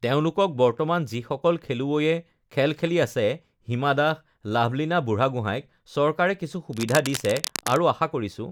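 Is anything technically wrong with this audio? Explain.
Yes. From 6.73 to 7.82 s there is cable scratch noise. A worn cable or connector was likely being moved, so its contact resistance kept jumping. That adds dense, uneven crackle over the speech. It sits around 10 dB below the speech, scratchy and rustling.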